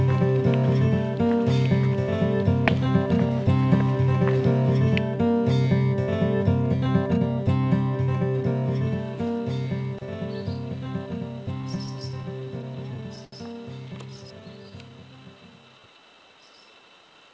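The audio comes through a call path with nothing above 8 kHz, which fits a G.722 wideband codec at around 64 kbps, and it shows two jitter-buffer faults. From 11.62 to 13.34 s there are repeated stalls (stutter). About fourteen times the sound hangs on what was just heard, with the longest hold lasting 75 ms and roughly 205 ms added in all. Packets were arriving late, so the buffer kept running dry and the receiver stretched the last sound until more arrived. Unlike packet loss, nothing is cut out, and the passage drags in jerky halts rather than skipping. From 13.93 to 16.82 s a jitter buffer slow-down follows. The buffer rebuilds its reserve by repeating single pitch periods, adding 236 ms and running the passage at 92% speed. Unlike the stutter, the stretch is smooth and continuous, with the pitch unchanged and drawn-out sounds giving it away.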